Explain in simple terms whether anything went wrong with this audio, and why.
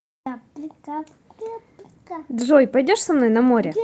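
Nothing went wrong with this speech recording. It travelled over an ordinary internet-call connection using the Opus codec, which keeps sound up to about 8 kHz, so the very top end is trimmed away as is normal for that kind of call.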